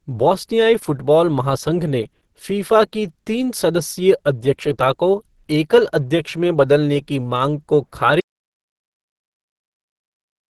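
Throughout the recording, the speech was likely squeezed through Opus compression at a low bitrate, which fits roughly 16 kbps in its hybrid speech mode. Nothing remains above 12.1 kHz, and the voice sounds plainly muffled, hoarse and grainy.

From 8.20 s to the end, the input was likely cut off while recording continued, an audio dropout to silence. The speech stops abruptly mid-flow and is followed by silence with no room tone left.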